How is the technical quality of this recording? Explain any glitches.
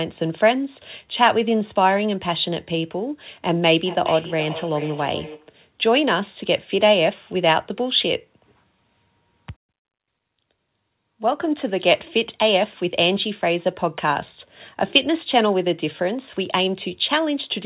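The recording has one clear glitch, feedback echo between two devices, heard over telephone-narrow sound with nothing above 4 kHz, which fits G.711 call coding.

From 3.52 to 5.58 s, a second device in the room replays the call into a microphone whose echo canceller ignores it. The sound returns roughly every 0.4 s, thin and ringing, peaking about 13 dB below the speech.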